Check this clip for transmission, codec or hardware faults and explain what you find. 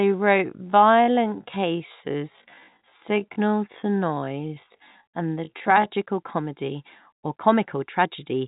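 One fault stands out: a time-stretched section running from 0.00 s to 5.92 s, where the speech plays at about 0.6 times its normal pace while the pitch stays where it should be. The likely cause is software stretching that stretch to fill a longer duration by repeating short fragments of the waveform. The slowed passage drags, and the pace jumps back to normal abruptly at 5.92 s. Throughout, the telephone-band G.711 coding cuts everything above 3.8 kHz.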